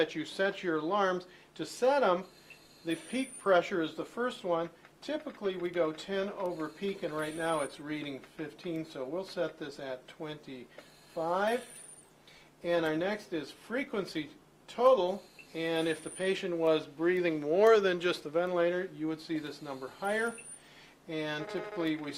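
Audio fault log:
3.22–15.22 s: adaptive stream at a lower bitrate. Codec artefacts rise abruptly with no gap, consistent with Opus dropping from 64 to 24 kbit/s.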